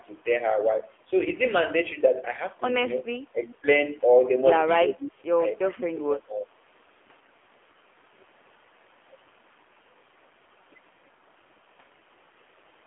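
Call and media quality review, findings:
AMR narrowband mobile codec throughout, AMR-NB at 7.4 kbps, line band 300 Hz to 3.4 kHz. Low-rate vocal-tract model rebuilds speech from sparse pulses, so the voice is plainly buzzy and synthetic, with nothing above 3.4 kHz.

Clock slip clicks, 0.15 s to 12.64 s, roughly every 0.7 s, about fifteen in all. Likely two free-running device clocks about 30 ppm apart, each slip dropping or repeating one sample. Heard as faint, evenly spaced ticks through the speech.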